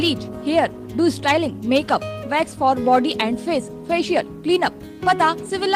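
No technical faults can be heard anywhere in this audio, and the signal holds steady and continuous throughout.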